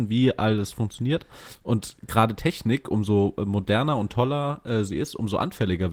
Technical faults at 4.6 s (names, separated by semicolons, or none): none